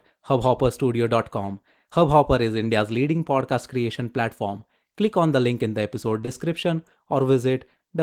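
At 6.21–6.25 s and immediately again at 6.25–6.29 s, short concealed packet loss occurs. Each time about 20 ms of speech missed the decoder, which extended the preceding sound to bridge the gap, leaving a brief smeared wobble before the real audio resumes.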